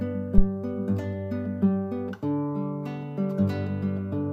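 From 0.38 to 0.44 s, a deep thump peaks at about -5 dBFS and fades within 13 ms. This is a phantom power thump, from a supply switched on or off on a live input.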